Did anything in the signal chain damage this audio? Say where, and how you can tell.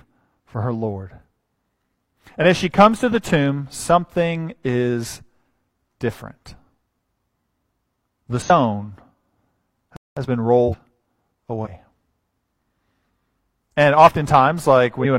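Yes. Compressed frames are skipped at 8.41, 10.64, 11.61 and 14.96 s. Each time the sound jumps ahead a little, about 0.1 to 0.2 s. It's the decoder dropping missing or damaged codec frames.

There's a playback stall at 9.96 s: a 0.2 s dead gap mid-flow, likely the player's buffer running dry before it picked up again.

Right after it, from 10.17 to 11.91 s, the time-compressed catch-up runs at 1.1x. It sounds hurried at normal pitch while the player trims its backlog.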